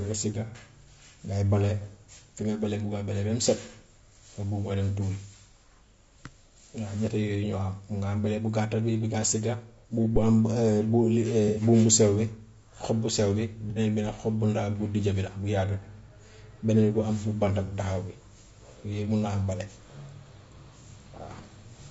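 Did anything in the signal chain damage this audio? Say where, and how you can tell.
Yes. Throughout the speech there is a rough, grainy texture, with noise filling the spaces between the harmonics and a top band that sounds thin and synthetic. That points to the codec stage, most likely low-delay AAC compression (AAC-ELD). Its short frames resolve the pitch harmonics poorly, and the coder runs out of bits to describe them. The audible damage fits a bitrate around 32 kbps.

Five brief smeared, phasey patches interrupt the speech, at 0.47–0.55 s, 9.80–9.84 s, 11.48–11.62 s, 13.70–13.78 s and 17.66–17.74 s. Each lasts roughly 30 to 90 ms. This is AAC frame loss with concealment, arising at the network or transport stage. Frames went missing, and the decoder patched each hole by re-synthesising from the last good spectrum. The longest patch, at 11.48 s, fits about three lost frames.

At 10.16–10.37 s a deep thump appears and dies away in about 46 ms. 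This is a phantom power thump in the analogue wiring at the microphone input. A supply was switched on a live input, and the voltage step passed through the coupling capacitors as a low-frequency pulse.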